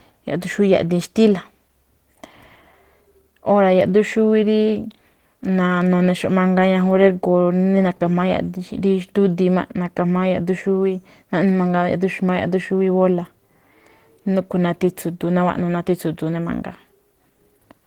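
Throughout this speech clip, Opus voice compression at a low bitrate, which fits roughly 16 kbps in hybrid mode, starves the linear-prediction core of bits, so the excitation is coded coarsely. The voice sounds plainly hoarse and slightly robotic, even though content still reaches about 20.1 kHz.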